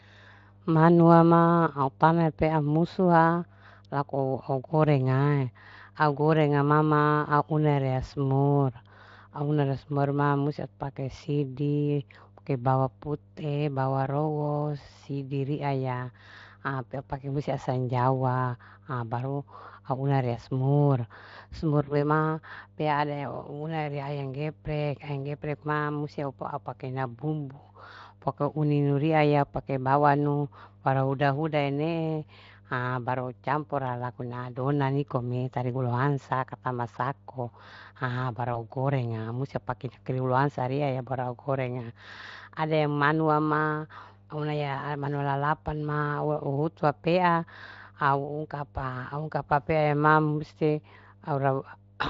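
Mains hum at 50 Hz runs under the whole clip, about 30 dB below the speech. It is a steady, unchanging tone, unlike broadband hiss or rumble that shifts with handling. At 21.83 to 21.95 s, just before "ma pea", VoIP packet loss concealed by the speech codec stretches the sound into a fading buzz or coloured noise. The gap of about 40 ms fits two lost frames. The voice stays weakened briefly afterwards rather than cutting cleanly, which is what separates it from a dropout. The same thing happens more briefly at 38.53 to 38.66 s, from about 20 ms lost.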